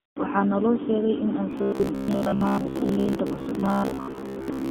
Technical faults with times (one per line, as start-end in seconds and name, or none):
0.00-4.70 AMR narrowband mobile codec
0.00-0.16 AMR comfort noise
1.51-4.70 robotic sound from repeated short buffers